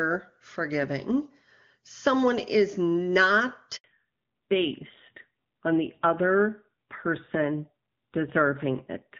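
A handover gap at 3.76 to 3.84 s cuts this speech recording to silence for 80 ms as the call switches networks, so no speech frames arrive and that stretch is lost. A fallback to narrowband follows at 3.84 s and lasts to the end: the call drops from HD Voice to an older narrowband codec, so nothing above 4 kHz passes and the voice turns duller and rougher. Before the switch the wideband HD Voice sound is clear, which fits AMR-WB at 23.85 kbit/s, and after it the sound fits AMR-NB at 7.4 kbit/s.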